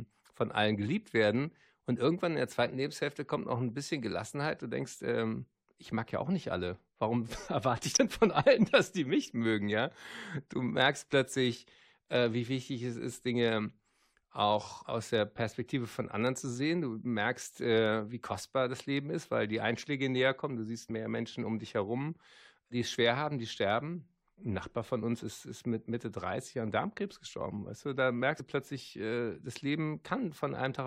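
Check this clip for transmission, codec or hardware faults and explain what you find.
The speech has one codec fault, compressed frames skipped, at three points: 7.91–7.98 s just before "von allen dass die", 20.89 s, and 28.39 s between "du da" and "du plötzlich äh das". Missing or rejected frames make the audio jump ahead by about 70 ms, 20 ms and 50 ms.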